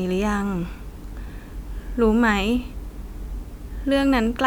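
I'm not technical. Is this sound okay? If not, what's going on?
Yes, nothing in this speech recording points to a technical fault, so there is nothing here to fix.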